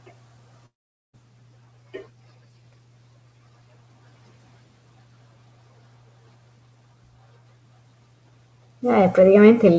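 Noise suppressor artifacts run through the whole clip. The suppressor pulls the steady room noise down by about 19 dB wherever it judges a band to be noise, so the background sinks in the gaps and surges back under the speech. On a spectrogram the noise floor looks patchy and pumping, with isolated bins flickering on and off between phrases rather than forming an even haze.

Speech cut by the noise suppressor comes right at the start, from 0.05 to 0.16 s. The suppressor mistook the quiet opening of the speech for noise and dragged it down with the background, by up to about 19 dB, over roughly a tenth of a second. The onset sounds swallowed, as if the first sound were clipped faint. The waveform shows a thin, shrunken envelope there before the level jumps up, and the spectrogram shows the low-energy components blanked out.

From 0.66 to 1.15 s there is a gap of nearly half a second, likely a long network dropout in which no audio reached the receiver. 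The receiver briefly extends the last sound as a fading buzzy tail, then gives way to near silence for about 0.44 s before speech resumes further on, with the lost section simply gone. The waveform flattens to almost nothing across that span, and the spectrogram shows a smeared, decaying smear that drops to an empty band. Around all of this the audio tops out at 8 kHz, which fits a G.722 call codec near 64 kbps, and the room noise sits about 16 dB below the speech.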